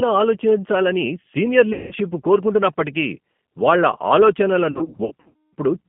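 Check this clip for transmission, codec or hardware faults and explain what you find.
Yes, there are two faults here: plainly audible low-bitrate codec coloring across the whole clip, and two patches of packet loss that the decoder papered over.

The G.729 codec is on throughout, and the damage is plainly audible. The speech is rebuilt from a vocal tract filter, a pitch predictor and a few pulses per frame, which fits the 8 kbit/s codec. Everything sits in a narrow 150 to 3400 Hz line band, and the voice sounds slightly rough and synthetic.

There is also VoIP packet loss concealed by the speech codec, at 1.73 to 1.94 s and again at 4.72 to 5.54 s. The first gap loses 180 ms. The second loses 510 ms scattered over 810 ms, with a longest run of 240 ms. Both fit 30 ms packets. The decoder stretches its last pitch and filter while turning the gain down, so each gap smears into a fading buzzy tone or coloured noise. 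The voice stays weak for a moment after packets return.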